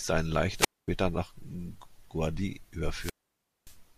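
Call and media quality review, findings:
Wireless microphone squelch dropouts at 0.53–0.89 s and 2.91–3.78 s. Hiss swells, then the receiver squelch mutes the fading FM signal for about 232 ms and 573 ms before the speech returns.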